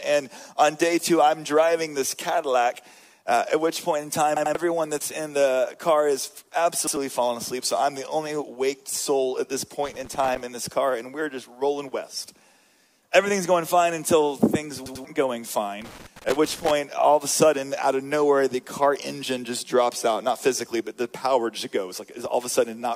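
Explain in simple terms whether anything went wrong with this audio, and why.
A couple of things went wrong here, and they're two different kinds of trouble.

First, there are three repeated buffer stutters, at 4.37 to 4.55 s, 6.87 to 6.97 s and 14.86 to 15.05 s. Each time, fresh audio didn't reach the playback device in time, so it just replayed the last chunk it had. That chunk is about 93 ms long, which fits a 4096-sample buffer. It plays two extra times at 4.37 s and 14.86 s, and once at 6.87 s. You hear a quick hard-edged stutter, and the real audio underneath is skipped, roughly a fifth of a second at the double repeats.

Second, there are two bursts of loose connector crackle, from 9.86 to 10.41 s and from 15.82 to 16.71 s. This sounds like a cable or plug with a bad contact that keeps connecting and disconnecting as it shifts. It chops the sound into an uneven, scratchy crackle, lasting about half a second the first time and nearly a full second the second time.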